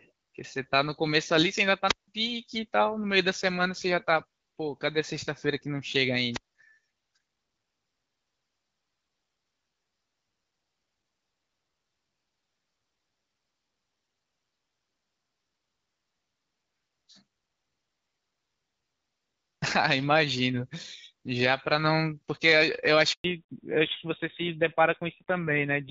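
The first trouble shows up early. From 1.87 to 2.08 s there's a wireless microphone squelch dropout: the radio link from the mic fades, you get a quick swell of hiss, and then the receiver's squelch slams the output shut for about 168 ms before the speech comes back. The same thing happens again from 6.31 to 6.55 s, this time with a mute of about 185 ms. Both sound like a short hiss followed by a hole of near silence.

Near the end, from 23.12 to 23.24 s, there's a handover gap. The call is being passed from one network to another, and for 120 ms no speech frames arrive. The speech dies away almost instantly and there's just dead air until the new link picks up. Whatever was said in that window is gone for good.

Straight after the gap, from 23.24 s to the end, the call drops back to narrowband. Up to this point the HD Voice path sounds clear, with only light coding damage, which fits AMR-WB at 12.65 kbit/s. 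After the switch, everything above 4 kHz disappears, and the speech turns duller and rougher. That sound suggests a fallback to an older codec, something like AMR-NB at 7.4 kbit/s, and it stays like that until the clip ends.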